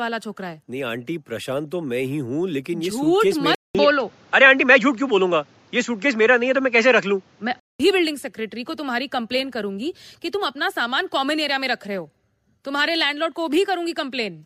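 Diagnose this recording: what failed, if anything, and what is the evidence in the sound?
At the driver or device-selection stage, the speech from 3.55 to 7.80 s loses everything above 7.6 kHz, after a 200 ms silence, with a shift in level of a few decibels and a new noise floor far below the signal. This is likely an input switched to a poorer device. A codec bandwidth drop would not bring the gap or a different background.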